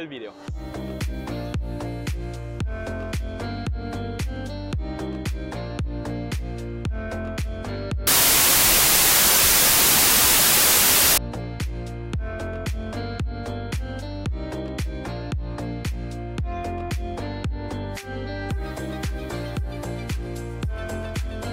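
From 8.07 to 11.18 s, wrong sample width: 24-bit samples read as 16-bit bring loud noise, buried sound at two-thirds speed and lower pitch. A byte-order error would keep the speed.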